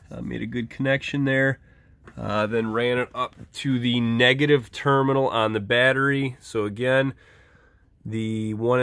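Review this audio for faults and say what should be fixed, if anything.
No faults turn up in this audio, so nothing needs to be fixed.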